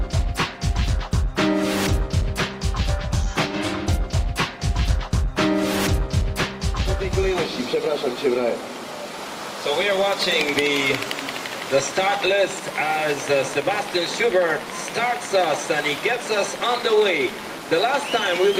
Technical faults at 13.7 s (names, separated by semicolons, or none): none